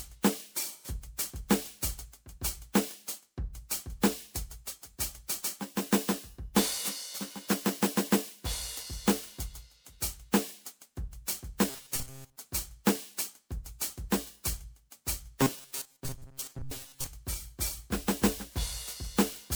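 From start to finish the music sounds swirly, smeared and hollow, with transient attacks blurred and a grainy residue. This points to generation loss, likely from the audio being decoded and re-encoded as MP3 at 128 kbit/s about four times. Each pass quantises the signal again on a shifted frame grid, so the coding noise and spectral holes of every generation accumulate instead of staying at a single pass's level.

From 11.7 to 12.36 s, and again from 15.41 to 17.06 s, the music collapses into a rigid, metallic buzz at 134 Hz that only loosely tracks the underlying material. This is robotic sound from repeated short buffers. The playback side likely ran short of new data and kept repeating its last chunk, one that fits a buffer of about 7.5 ms, while most of the real audio in those spans was skipped. That fixed repetition rate imposes the constant pitch.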